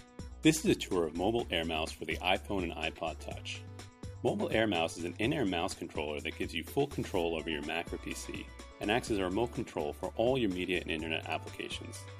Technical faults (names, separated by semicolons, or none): none